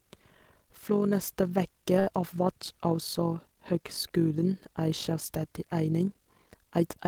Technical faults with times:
0.00-7.08 overlap-add ripple
1.99-2.09 short stall from a late packet

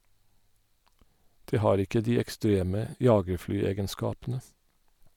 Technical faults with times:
none

